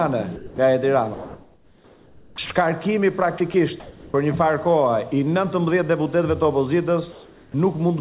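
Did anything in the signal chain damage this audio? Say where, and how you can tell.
Yes, and all of it comes from the call processing stage.

Sound dropped by the voice detector, 0.36 to 0.58 s: about 180 ms of sound gives way to steady noise. The likely cause is the sender's detector judging that sound to be background and stopping transmission.

Sound chopped by the voice detector, 1.14 to 2.50 s and 3.38 to 3.54 s: the sound breaks up, with holes filled by comfort noise. This is likely the detector toggling transmission on and off.

Comfort noise in place of the background, 3.80 to 4.14 s and 7.12 to 7.54 s: a featureless hiss, about 2 dB quieter, replaces the detailed background. It is likely receiver-generated fill during discontinuous transmission.

Onset clipped by the voice detector, 7.51 to 7.54 s: the sound starts abruptly and loses its first 30 ms. This is likely because the detector reacted late and comfort noise covered the gap.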